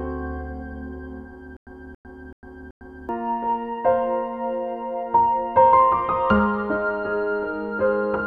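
From 1.57 to 3.09 s, a stutter with silent gaps. A 279 ms burst repeats four times, each followed by 101 ms of silence. This is likely a stalled stream.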